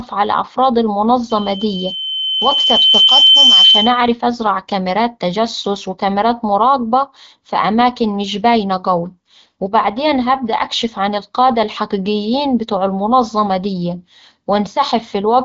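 From 1.29 to 4.14 s, after "على أفراد", a loudspeaker feedback squeal builds at 3.1 kHz over about two seconds to roughly 10 dB above the speech, as the microphone re-amplifies its own loudspeaker.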